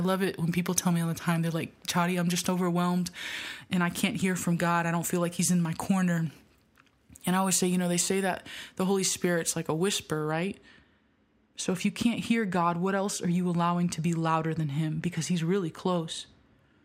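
From about 10.32 s right through to the end of the clip at 16.85 s, the speech picks up a de-emphasis fault: a treble cut meant to undo pre-emphasis got applied to audio that didn't need it. The top end rolls off gently rather than at a sharp corner, landing about 10 dB down at 10 kHz compared with 1 kHz. You hear it as the speech suddenly going dull and muffled, like a blanket dropped over the highs.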